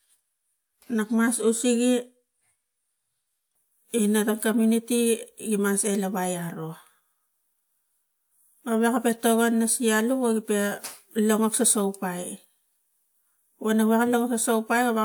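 Nothing stood out as a technical problem when listening to this speech recording.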